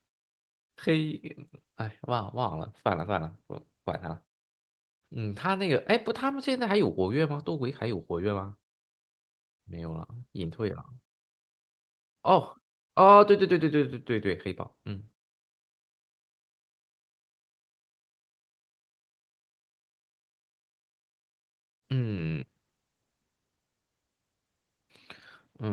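No technical faults turn up anywhere in the speech.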